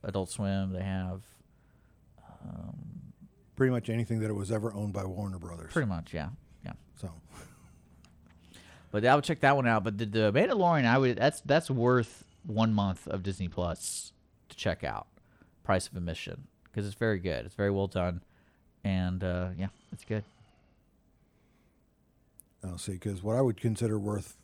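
Speech with two Bluetooth SBC bit pool drops, from 10.5 to 14.3 s (after "the the", recovering by "to check out") and 19.4 to 20.8 s. Both the dulled treble and the gritty noise fit the bit pool falling from 28 to around 9, near 78 kbps. There are no dropout gaps.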